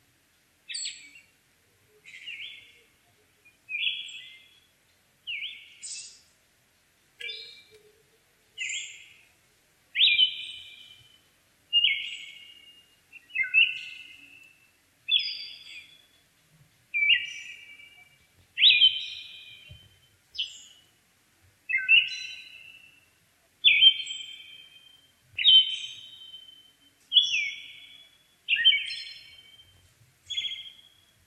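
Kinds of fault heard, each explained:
Filter restarted on every block: the filter discards its stored state at each block boundary and starts from silence, so every block opens with a small transient. These add up to a steady 43.1 Hz buzz, consistent with 1024-sample blocks, that grows and fades with the sound's level.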